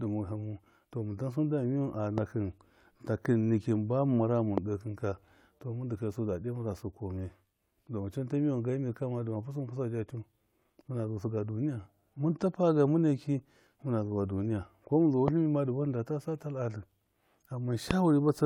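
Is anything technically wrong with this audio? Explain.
Yes, the speech is interrupted by four loud pops, at 2.18, 4.58, 15.28 and 17.91 s. Each is a single sharp click lasting about 20 ms, likely from a sudden voltage step or pulse, such as a plug, switch, static discharge or driver glitch, entering the signal chain. It sits well above the speech level, and the last two hit noticeably harder than the first two. The speech continues underneath each one without a break.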